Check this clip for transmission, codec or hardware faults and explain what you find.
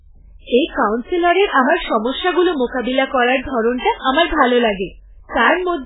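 One codec fault runs through the whole recording. The speech is heavily damaged throughout, and the likely cause is MP3 compression. Nothing is heard above about 3.8 kHz, so the top is cut flat. The damage points to a very low bitrate, around 8 kbps. With so few bits, the encoder drops the treble and discards weak frequency lines. Those lines flicker in and out between frames. The result sounds watery and swirly, with smeared consonants and dull, muffled sibilants.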